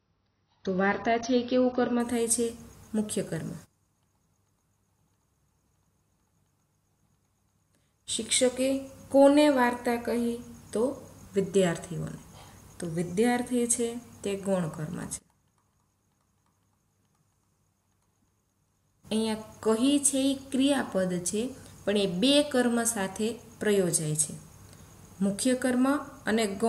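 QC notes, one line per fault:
0.0–2.0 s, adaptive stream starting at a low bitrate. The opening two seconds have nothing above about 6.6 kHz, so the top end sounds dull and closed in. Codec artefacts are heavier here too. The player began on a cheap rendition to start fast, which fits a low-rate AAC stream near 24 kbit/s. At 2.0 s it steps up, likely to around 96 kbit/s, once the connection was measured. Treble returns abruptly, with no gap.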